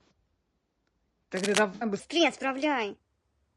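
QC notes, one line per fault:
Throughout: low-delay AAC compression. The speech sounds rough and grainy, with noise filling the gaps between harmonics and a thin, artificial top band. This is likely AAC-ELD coding. Its short frames resolve pitch poorly, and the damage fits a bitrate near 32 kbps.
1.36 to 1.59 s: cable scratch noise. A dense, uneven burst of scratching rides over the speech, only a little quieter than the speech itself. The likely cause is a worn cable or connector shifting, so its contact resistance jumps rapidly.
1.75 to 1.85 s: AAC frame loss with concealment. A 60 ms patch turns smeared and noisy. The decoder rebuilt the gap from the last good spectrum instead of real data. The gap's length fits roughly three lost frames.
2.00 to 3.56 s: section at the wrong speed. From here to the end the speech plays 1.3 times too fast and sits about five semitones high, so it sounds hurried and thin. 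The likely cause is playback fitted to the wrong clock, shifting speed and pitch together.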